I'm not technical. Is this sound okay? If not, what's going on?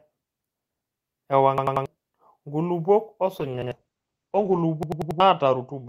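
No. At 1.58–1.86 s, 3.62–3.72 s and 4.83–5.20 s, the speech stutters as one tiny chunk, about a tenth of a second long, repeats with hard joins. This is a repeated buffer: fresh audio arrived late, so the player replayed the last piece.

From 3.4 s to the end, the speech turns rough and muffled. This is a call bitrate drop: the connection weakened, so the sound was squeezed into far less data and lost its crispness.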